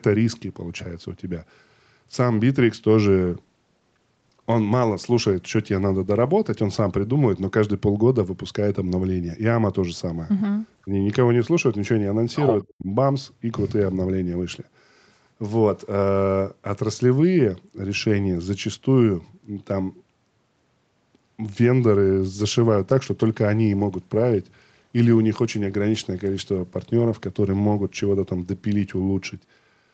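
From 3.2 to 10.71 s a call bitrate drop coarsens the Opus coding, pointing to a fall from about 48 to 18 kbps for roughly three seconds at its lowest. The sound turns rough and watery, and the spectrogram shows smeared, blotchy detail below the 8 kHz band edge. Just after, at 10.85 to 10.89 s and again at 12.63 to 12.88 s, the level dips briefly, shallowly first, then almost to silence. This is likely speech suppressed in double talk, seen as notches carved into the waveform envelope. From 22.27 s to the end the same bitrate drop returns, lasting nearly six seconds at its lowest.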